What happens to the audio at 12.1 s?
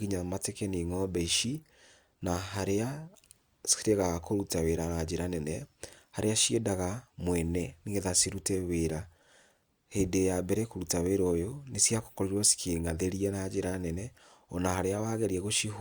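Nothing goes wrong at 12.1 s; the speech carries on intact through that moment.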